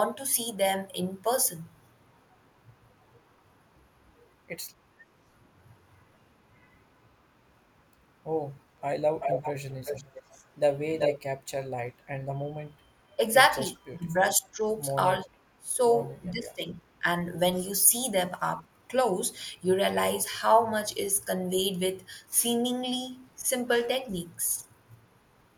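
At 9.2 s an echo leak shows up: a delayed copy of the speech trails the original by 383 ms, only about 5 dB quieter, and runs until 10.23 s. That's most likely a loudspeaker on one end whose echo canceller didn't scrub its mic pickup before sending it back. Right after, from 10.3 to 10.42 s, the speech gets pushed down by roughly 15 dB for a tenth of a second. That's speech suppressed in double talk, likely the canceller ducking the talker because it couldn't tell them apart from the echo. The echo leak returns from 10.99 to 11.19 s, this time about as loud as the speech itself. Inside it, from 11.13 to 11.17 s, there's a tiny dip of around 5 dB. Then the double-talk suppression gets heavier. From 13.93 to 14.67 s the speech drops by up to about 20 dB, and at 15.58 to 15.81 s by as much as about 25 dB. Between 16.26 and 17.04 s it sinks roughly 20 dB again, so the speech sounds pulled back for a good chunk of each stretch.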